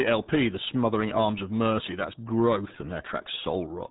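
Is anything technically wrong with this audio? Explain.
Yes. Throughout the clip, the speech has passed through the RealAudio 14.4 codec, a dial-up-era coder whose sound fits an 8 kbit/s stream. It removes everything above 3.8 kHz and rebuilds the rest coarsely, leaving heavy codec damage: muffled, gargly speech.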